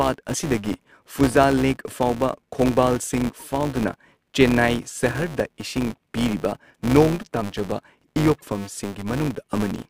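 Throughout the speech, a steady 200 Hz buzz rides on the audio. This is a filter restarted on every block: the filter discards its memory at each block boundary and begins again from silence, leaving a small transient at the start of every block. A 200 Hz repeat points to blocks about 5 ms long. Unlike mains hum, the buzz swells and fades with the speech level and drops away in pauses. Unlike dropout clicks, it stays evenly spaced.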